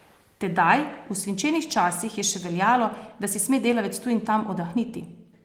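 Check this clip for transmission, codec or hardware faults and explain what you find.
No transmission or hardware faults.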